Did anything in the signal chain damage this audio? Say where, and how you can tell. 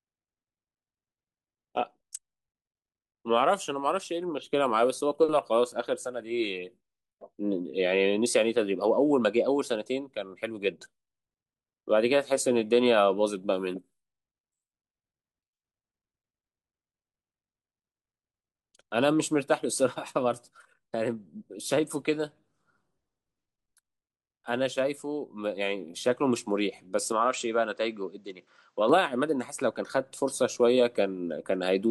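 Yes: from 27.12 to 28.89 s the speech goes dull, nothing above 8.2 kHz, about 5 dB quieter, with faint new hiss. Likely an input switched to a poorer device.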